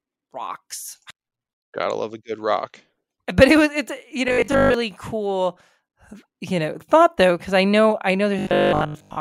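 Robotic sound from repeated short buffers appears twice in this speech clip: from 4.28 to 4.74 s, right after "it was it's you", and from 8.39 to 9.19 s, after "because i know i". In both stretches the speech becomes a rigid, metallic buzz at 50 Hz. The likely cause is audio arriving too slowly, so a 20 ms chunk is replayed over and over while most of the real speech is skipped.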